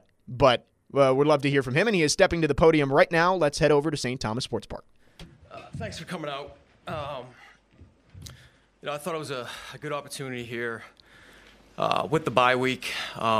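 No technical faults occur at any point in the clip.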